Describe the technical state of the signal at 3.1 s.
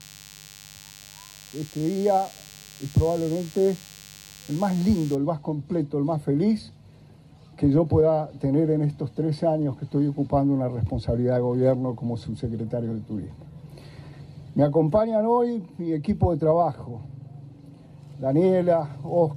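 DECT cordless phone buzz runs from 0.0 to 5.16 s, so it covers 3.1 s. Radio bursts every 10 ms from a nearby handset or base are rectified in the audio circuit, leaving a thin 100 Hz buzz rich in harmonics, roughly 25 dB beneath the sound.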